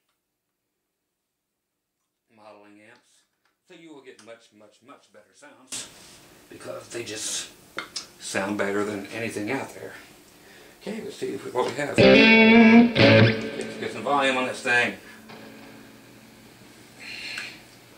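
One channel inverted, 0.0 to 5.72 s: the sound drops by about 28 dB to a faint residue, likely from reversed polarity cancelling the shared content in mono.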